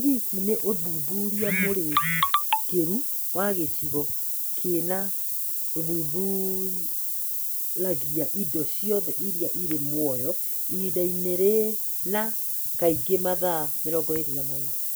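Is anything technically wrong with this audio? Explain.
Yes, there's one problem, and it runs the whole length of the speech: low bit depth with noise shaping. The audio has been squeezed down to about 5 bits, so every sample gets rounded hard, and that rounding error is fed back and pushed up toward the high end of the spectrum. What you hear is a constant, thin hiss that gets much stronger toward the top of the band, and it's roughly as loud as the speech itself.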